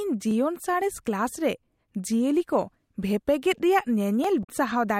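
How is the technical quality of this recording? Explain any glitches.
The recording has one audible glitch, near the end of the speech. From 4.41 to 4.49 s there is a brief glitch caused by damaged data in the compressed stream. Some bytes in that stretch were corrupted, so the decoder misread those frames, lost sync and had to hunt for the next valid frame header before it could resume. On a spectrogram, these roughly 80 ms appear as a break in the speech harmonics.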